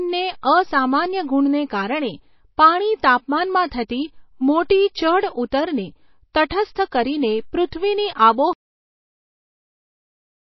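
Throughout the speech, nothing remains above 5.8 kHz and the sound is plainly watery and swirly, likely from MP3 compression at a low bitrate near 24 kbps. Pre-echo puts a brief hiss ahead of attacks at 0.41, 4.68, 6.49 and 7.71 s, as block quantisation noise spreads before each onset and softens it. At 8.53 s the cut-off end stops the audio mid-sound with no decay, leaving silence because the final buffers were never played.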